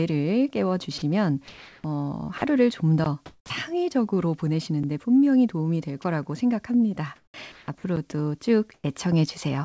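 At 0.98 s and again at 2.38 s the speech briefly gives way to a flat hiss for about 40 ms, and from 1.48 to 1.84 s a longer 360 ms patch of steady noise swallows part of the sound. This is sound dropped by the voice detector, which likely judged those parts to be background and stopped sending, leaving the receiver to fill in synthetic noise.

At 3.04 s a block of digital silence cuts out about 17 ms of sound with no fade. The likely cause is an output buffer left unfilled in time.

From 3.26 to 3.50 s the real background turns smooth and featureless and sits about 3 dB lower. This is comfort noise in place of the background, likely generated because transmission paused during quiet.

Inside that stretch, the sound resuming at 3.44 s arrives abruptly, missing about 60 ms of its soft start. This onset clipped by the voice detector likely comes from the detector reacting late.

At 4.83 s, just before "분명히 도움이 될", another abrupt gap of digital silence lasts 5.8 ms, which fits a 256-sample block left empty.

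Right after "분명히 도움이 될", at 6.02 s, a 20 ms flicker of noise replaces the sound. This is again sound dropped by the voice detector, and the likely reason is that the detector briefly read the speech as background.

From 7.16 to 7.84 s the audio turns choppy as about 400 ms of it is swapped out. This is sound chopped by the voice detector, likely caused by the detector toggling transmission on and off.

At 7.96 s an 8 ms block of digital silence cuts in and out.

From 8.74 to 8.84 s, comfort noise in place of the background returns as a brief, flatter hiss about 4 dB quieter. Throughout the clip, the G.722 call codec leaves nothing above 8 kHz.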